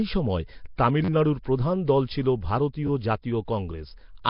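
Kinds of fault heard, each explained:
Nellymoser compression: The whole clip has the rough, hissy halo and smeared, underwater character of heavy low-bitrate block coding. Nothing is left above 5.3 kHz. The likely cause is Nellymoser Asao at around 22 kbps, the old Flash microphone codec. It codes short blocks with a fixed small bit budget, drops weak bands and fills them with noise. That noise fill is what gives the speech its grainy, washed texture.
Pre-echo: At 0.76 s a burst of hiss runs for about 24 ms ahead of a sharp attack and blurs its onset. A transform codec spreads its quantisation noise evenly across each block. When a loud transient lands late in a block, noise sized for that transient also fills the quieter stretch before it. The result is a short smear or hiss that arrives before the sound itself.
Repeated buffer: From 1.045 s to 1.088 s one short fragment of audio plays five times in a row, once plus four extra plays, with a hard join at each repeat. 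Each repeat lasts about 10.7 ms, which fits a 512-sample buffer. With buffers this short it comes across as a brief buzz or stutter rather than a clear echo. It happens when new audio fails to arrive in time and the device replays its last buffer. It ends just before "প্রধান দল ছিল".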